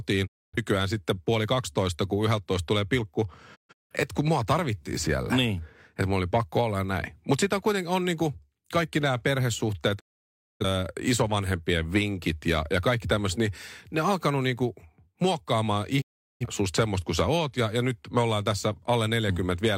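Digital broadcast dropouts mute the speech at 0.26–0.58 s before "sitten puoli kaksitoista kun", at 3.54–3.95 s in several short holes, at 9.99–10.66 s after "niinku kaikki nämä perhesuhteet", and at 16.00–16.46 s after "on alkanut niinku muokkaamaan". Failed frames are silenced behind quick 20 ms fades, leaving true silence rather than smeared, concealed sound.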